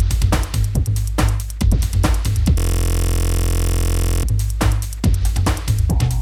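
The audio carries a system hang loop from 2.58 s to 4.23 s. For that stretch, one 23.22 ms slice of sound repeats exactly, over and over. The repeat rate is 43.1 Hz, so it comes across as a steady, low buzz rather than a stutter. The sound card kept replaying its ring buffer while the computer or driver stalled. The loop length fits a 1024-sample buffer. Normal sound resumes at 4.23 s.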